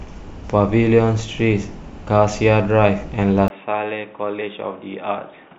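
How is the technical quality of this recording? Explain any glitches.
The recording has one clear glitch, in its final two seconds. At 3.48 s the input likely switched to a poorer device: after a brief gap of about 20 ms, the speech loses everything above 3.8 kHz, turning dull and boxy, drops roughly 10 dB in level, and carries a faint new background noise through to the end.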